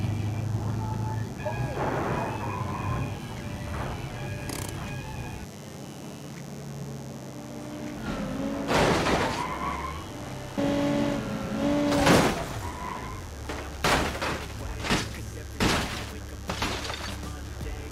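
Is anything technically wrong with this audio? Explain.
Yes. A mains buzz runs throughout: sharp switching spikes, probably from a dimmer or rectifier, enter the signal twice per 50 Hz cycle, roughly 20 dB below the audio. It sounds like a steady, raspy buzz, and a spectrogram shows evenly spaced horizontal lines at 50 Hz harmonics up into the kilohertz range.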